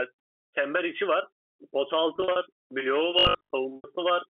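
From 2.16 to 2.36 s, packet loss with pitch repetition: about 120 ms of audio goes missing in scattered gaps over 200 ms, none longer than 40 ms. The receiver bridges each gap by repeating the last pitch period, so the sound briefly holds on a slightly buzzy tone instead of dropping out. The same fault returns from 3.76 to 3.84 s as an 80 ms loss, patched the same way.

Between them, from 3.19 to 3.55 s, a robotic sound from repeated short buffers appears, likely because new audio arrived too seldom and a 20 ms block was replayed in place of most of the real signal. This forces a rigid 50 Hz buzz that lasts the full 0.36 s. Pitch repetition, by contrast, holds the sound's own pitch for only a few tens of milliseconds.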